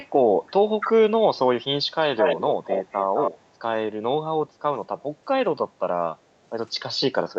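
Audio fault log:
0.46–0.51 s and 2.18–3.31 s, echo leak: the far end's echo canceller likely failed to remove all of its loudspeaker playback. A delayed copy of the speech returns, first as a faint scrap about 30 dB down at 329 ms delay, then a strong stretch only about 5 dB down, trailing by 211 ms.
0.85–0.91 s and 7.16–7.21 s, speech suppressed in double talk: while both sides spoke at once, the echo canceller likely could not tell the local talker from loudspeaker echo and turned both down. The speech dips for about 40 ms each time, by roughly 5 dB, then 10 dB.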